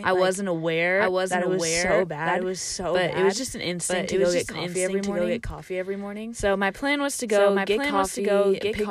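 From start to finish, the speech carries a doubled audio track. A second, full-band copy trails the original by about a second. It sits only a few decibels lower, around 5 dB down. It has no decay or room colour, so it sounds like a clean repeat rather than an echo. Each phrase lands twice, overlapping the next. The likely cause is the signal being picked up again through a slower path, or an edit holding two copies out of step.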